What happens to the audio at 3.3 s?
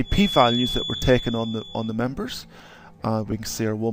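At 3.31 s there is a lost LE Audio frame: a brief gap that fits a single 10 ms frame, which the LC3 decoder filled by reusing the previous spectrum with random signs. It sounds like a tiny noisy smear, visible on a spectrogram as a thin smudged vertical slice.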